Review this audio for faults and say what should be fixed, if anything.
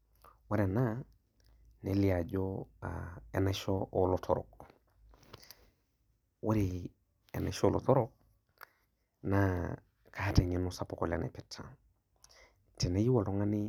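No faults found here; nothing needs fixing.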